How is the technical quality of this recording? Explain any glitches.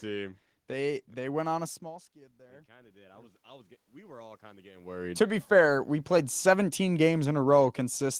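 The recording has two gain-control faults, the first reacting to a change in the talker's distance from the microphone rather than to any change in the sound source itself.

Automatic gain rising, 1.79 to 5.04 s: after the talker moves back at roughly 1.5 s, the input drops by about 23 dB. The gain control climbs by about 10 dB to compensate, so the voice and room noise swell together over more than three seconds.

Automatic gain falling, 5.41 s to the end: the talker moves again around 4.5 s, and the control then lowers its gain. The control backs off gradually, so the voice starts loud and then sinks, with the background noise dropping along with it.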